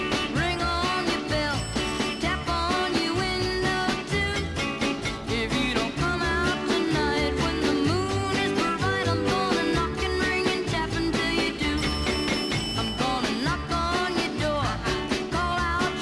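Nothing goes wrong anywhere in the audio, with no dropouts, glitches or other technical trouble to point to along the way.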